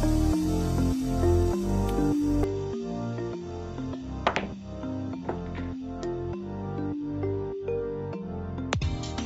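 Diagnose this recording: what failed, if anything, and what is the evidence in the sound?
At 2.44 s the audio turns duller and drops about 10 dB, with nothing above 7.6 kHz and a new noise floor some 45 dB down, through to the end, with no gap at the change. This is likely an input switched to a poorer device at the driver level.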